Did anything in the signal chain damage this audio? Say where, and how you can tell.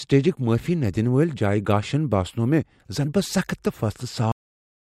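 Yes. The clip has a cut-off end, a fault at the storage or recording-buffer stage. At 4.32 s the speech stops mid-sound and the remaining 0.6 s is pure digital silence. The final buffers were never written, so the signal is truncated rather than faded. On a waveform the trace drops straight from active amplitude to a flat line with no decay tail. A spectrogram shows every frequency band ending on the same vertical edge.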